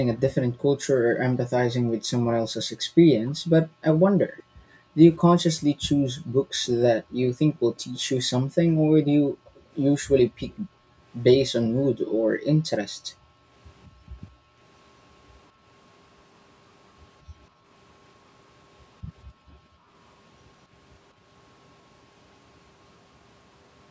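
From 0.49 to 14.59 s the room background is gated by the echo canceller, which pulls the microphone down hard while the far end plays. For roughly half of that span the ambience dips or vanishes, by about 40 dB at its deepest. Within that stretch, faint delayed copies of the speech appear at 3.3 s, 4.37 to 4.43 s and 9.55 to 10.54 s. These are likely an echo leak, where the loudspeaker sound got past the canceller and came back about 196 ms late, some 25 to 35 dB below the speech. Shorter gating dips follow at 17.23 to 17.65 s, of about 25 dB, and 19.24 to 19.9 s, of about 33 dB.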